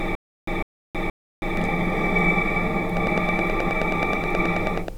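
The audio opens mid-stutter with silent gaps: a 152 ms burst repeats three times, each followed by about 321 ms of dead silence, until 1.57 s. This is likely a stalled stream replaying its last fragment. From 2.97 s to 4.89 s a regular train of clicks ticks at about 9.4 per second, some twenty sharp pops roughly 15 dB above the sound. The likely cause is interference or a faulty connection or power supply.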